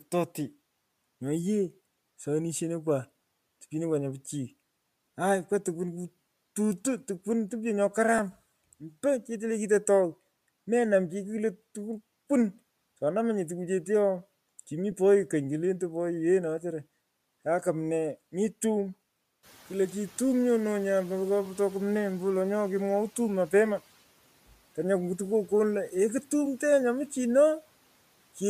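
At 8.18 s, just after "tukwan kututuntokwan topyo nyo", and again at 14.91 s, there are lost LE Audio frames. Each gap is 7.5 ms long, which fits a single dropped frame. The decoder covers it by repeating the previous spectrum with randomised phase. The result is a brief grainy smear in the speech rather than a click or hole.

From 19.43 s to 22.14 s, just after "mii tum", the noise suppressor is catching up. Room noise jumps by about 14 dB at around 19.5 s. The suppressor's noise estimate takes 2.71 s to adapt, so the new noise first comes through with only about 6 dB of reduction and then settles lower.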